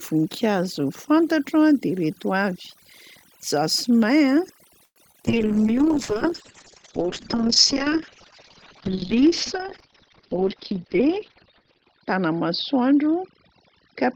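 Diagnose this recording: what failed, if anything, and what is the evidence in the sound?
Overdone noise removal in call processing runs throughout: the background sits near silent with twinkling specks. The effect is constant, unlike a codec fault tied to moments.

A call audio freeze at 4.85–4.98 s was likely caused by the network starving the jitter buffer. The last sound stretches, then about 60 ms of silence follows, and speech resumes intact. It is a gap, not a loss.

Short concealed packet loss at 5.12–5.16 s and 5.22–5.25 s comes from the network. Each 20 ms hole is bridged with a brief smear. Unlike the freeze, a little audio is truly gone.

A call bitrate drop in the codec starts at 5.29 s and lasts to the end. The rate falls from 32 to 6 kbps and the bandwidth from 20 kHz to 6 kHz, leaving the sound muffled and rough.

A jitter buffer speed-up at 10.16–11.26 s removes about a tenth of a second in pitch-period slices. 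Speech runs about 109% fast but keeps its pitch, which rules out a resampling error.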